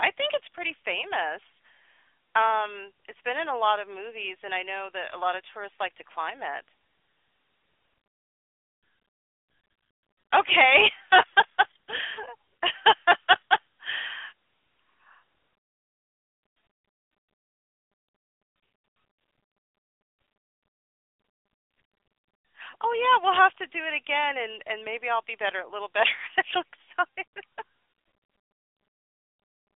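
AMR narrowband mobile codec, throughout: the speech is confined to a 300 Hz–3.5 kHz phone band, with plainly audible coding damage consistent with a 10.2 kbps mode.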